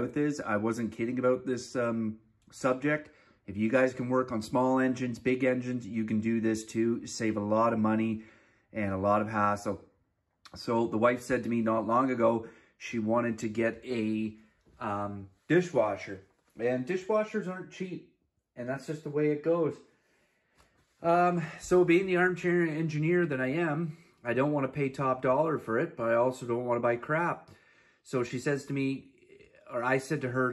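No technical faults are audible.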